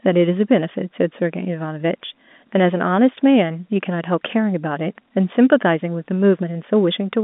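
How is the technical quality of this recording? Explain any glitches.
Telephone-band audio, with no glitches to explain.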